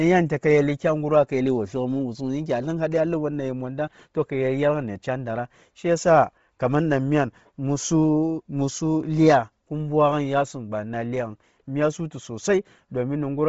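Bluetooth LC3 compression is the likely cause throughout: the speech ends sharply at 7.7 kHz, the discarded highs replaced by noise, giving a heavy breathy, grainy edge that points to about 24 kbps.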